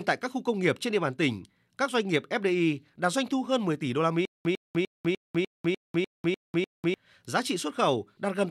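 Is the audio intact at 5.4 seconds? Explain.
No. At 5.4 s the clip is inside a stutter with silent gaps that runs from 4.25 to 6.94 s, right after "tỷ đô la". A burst of about 100 ms repeats every 299 ms with roughly 198 ms of dead digital silence between repeats, nine times over, and the sound meant for that span never arrives. This likely comes from a stalled stream replaying its last fragment at each retry. The empty gaps set it apart from a plain looping stutter.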